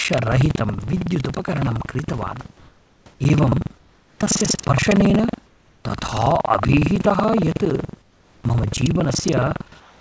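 Buffer tearing runs through the whole clip: the writing and reading positions in the audio buffer have slipped, so roughly a fifth of each buffer replays audio about a tenth of a second old. The result is a rattling buzz near 21.5 Hz, which fits a 2048-sample buffer. Unlike mains hum, it sounds only while speech is present.

Comfort noise in place of the background appears at 2.58–3.06, 3.78–4.20, 5.46–5.84, 8.02–8.44 and 9.80–10.00 s. In these pauses the real room background gives way to a smooth, featureless hiss. The hiss is level in the first gap, then about 4, 2, 5 and 1 dB quieter. The likely cause is discontinuous transmission, with the receiver synthesising the filler. Unlike a dropout, these gaps never fall silent.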